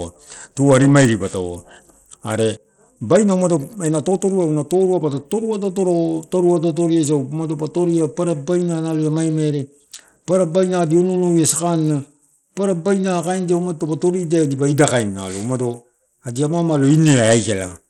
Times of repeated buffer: none

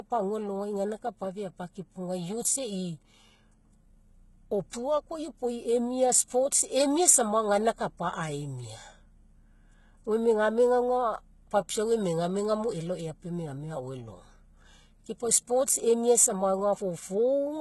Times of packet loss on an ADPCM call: none

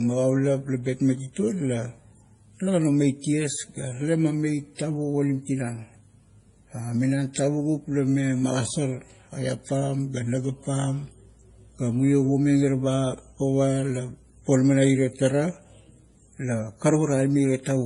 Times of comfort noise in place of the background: none

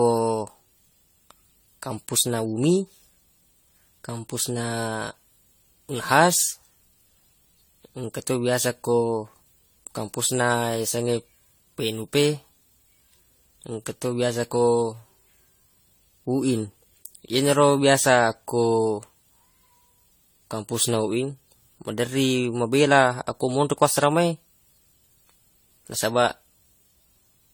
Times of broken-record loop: none

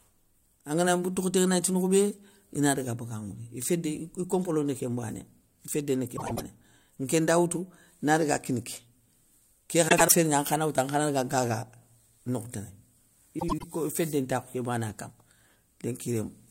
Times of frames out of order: 6.16-6.41, 9.88-10.12, 13.39-13.64

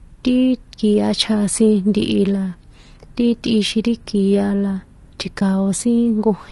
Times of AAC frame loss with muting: 5.39-5.42

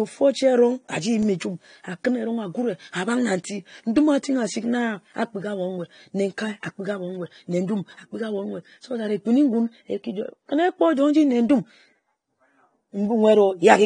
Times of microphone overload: none

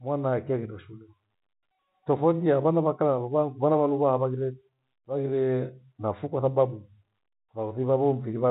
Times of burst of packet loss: none

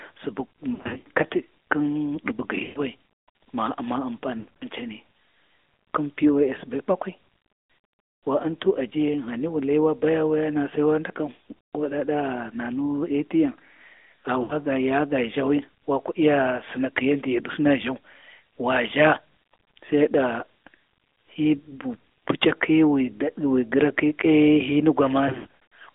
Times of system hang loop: none

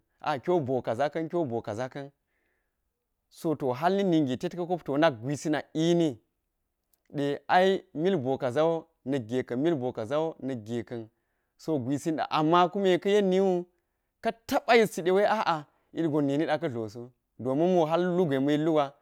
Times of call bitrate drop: none

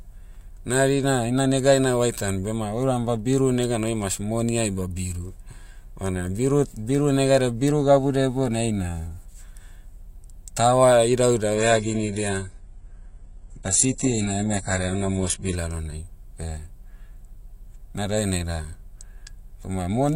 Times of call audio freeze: none

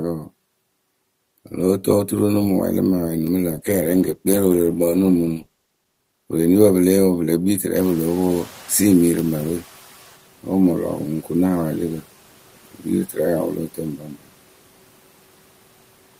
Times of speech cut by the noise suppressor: 13.97-14.29

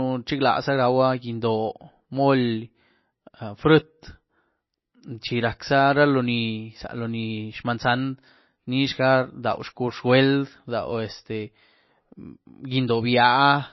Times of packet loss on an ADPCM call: none

